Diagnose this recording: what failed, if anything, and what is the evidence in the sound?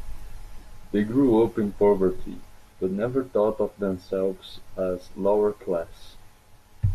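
Nothing in the signal chain has failed: the speech signal comes through with no audible defect at any stage of capture, conversion, transmission or playback.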